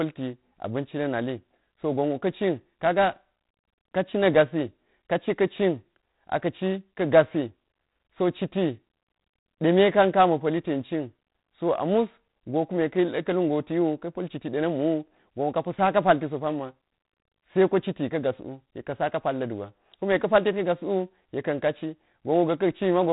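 From start to finish the speech carries G.726 ADPCM damage, and it's plainly audible. There's a gritty, rasping hiss that rises and falls with the speech level, which fits the coder running at 24 kbit/s. Nothing gets through above about 3.8 kHz, so everything sounds boxed-in and telephone-narrow.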